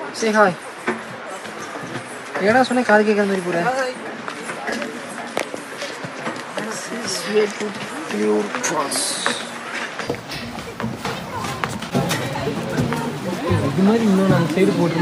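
From 0.0 to 10.07 s the sound is band-limited, with nothing above 11.8 kHz and a separate noise floor roughly 30 dB down. At 10.07 s it opens up without a gap or level jump, likely an input switched to a poorer device rather than a filter.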